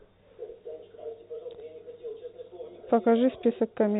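Nothing stood out on listening to this speech, which comes through the narrow band of G.711 telephone coding with nothing above 3.8 kHz.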